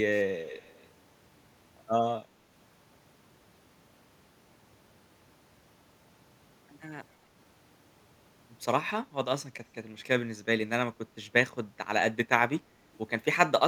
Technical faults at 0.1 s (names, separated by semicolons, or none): echo leak